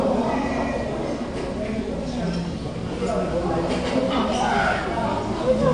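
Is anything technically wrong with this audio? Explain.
Yes. The whole clip carries plainly audible codec damage, likely from AAC compression. Nothing is present above 9.8 kHz, so the top end is cut away and the sound is dull. The encoder splits the signal into frequency lines and keeps only what a hearing model says matters. With few bits to spend, it drops the highest band and coarsely quantises the rest. That leaves a smeared texture, which fits AAC-LC at about 32 kbps.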